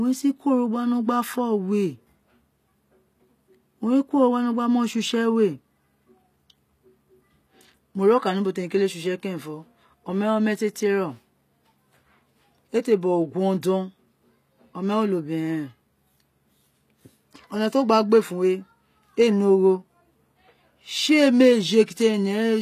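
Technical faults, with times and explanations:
Throughout, HE-AAC compression: the speech carries plainly audible codec damage, and nothing is present above 14.9 kHz. The treble has a bright but artificial quality, with s sounds gritty and metallic. This is likely HE-AAC at a low bitrate, around 24 kbps. Only the lower band is coded directly, and the upper band is rebuilt by copying lower bands upward and shaping them with a coarse envelope, so the harmonics above the crossover no longer line up with those below.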